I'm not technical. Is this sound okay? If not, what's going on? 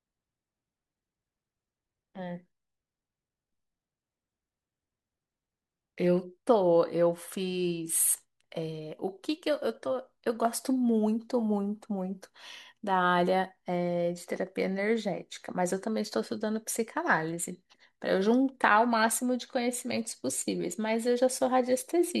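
Yes, this recording sounds fine. Nothing in it stands out as a technical problem that needs explaining.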